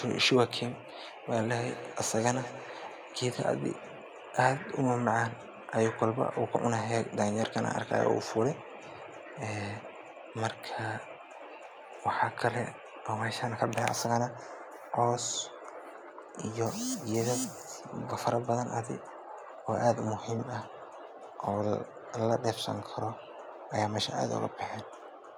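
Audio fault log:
1.59 to 3.49 s, feedback echo between two devices: for about two seconds the speech keeps coming back at itself, each repeat landing roughly a fifth of a second after the last and sounding thinner and more ringy, the loudest around 14 dB under the direct sound. That's two devices in the same room on one call: one plays out what the other's mic sent, that mic hears it again, and neither echo canceller touches sound it didn't play itself.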